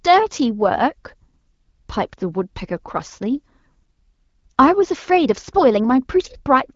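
Speech carried over an AMR wideband (HD Voice) link at 12.65 kbit/s, with the expected band limit leaving nothing above 7.2 kHz, and no faults are present.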